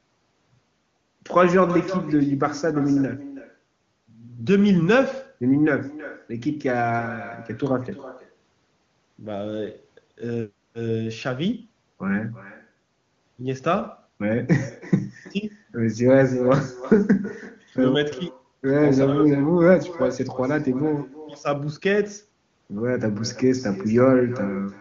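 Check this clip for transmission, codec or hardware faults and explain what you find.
One fault is present throughout: echo with no canceller. The far end's loudspeaker leaks into its microphone uncorrected. Each phrase returns roughly 300 ms later, about 16 dB quieter and thin. The AMR wideband (HD Voice) coding beneath it sounds clean, which fits a high bitrate.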